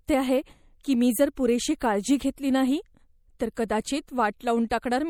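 A short speech recording carries plainly audible MP3 compression from start to finish: the sound has a watery, swirling quality, and sibilants come out with a metallic chirp. The likely cause is an MP3 encode at a low bitrate, fitting roughly 64 kbps, where the encoder ran short of bits and let weaker frequency components flicker on and off between frames.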